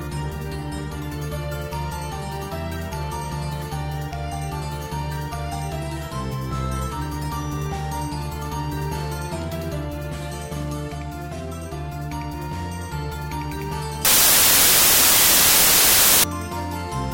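From 14.05 to 16.24 s the sound collapses into loud, harsh broadband noise, the mark of samples built from the wrong bytes: misassembled low bytes dominate.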